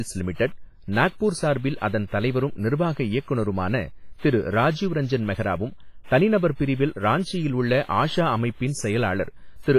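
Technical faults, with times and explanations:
Throughout, WMA compression: the speech has a ringing, washy quality, with a hiss that swells and fades along with the signal and nothing above about 15.5 kHz. This is likely a transform codec working at a low rate, heavy enough to suggest around 24 kbps. Its quantisation noise smears across tens of milliseconds around each sound, and the weaker spectral lines are dropped to zero, leaving the thin, watery residue.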